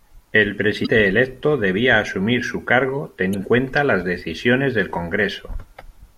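At 0.82 to 0.87 s the speech breaks up briefly. This is damaged data in a compressed stream. Some bytes of the encoded audio were lost or overwritten. The decoder cannot read those frames properly. It loses sync and hunts for the next valid frame header. The same fault returns at 3.31 to 3.35 s. Each blip lasts under 50 ms.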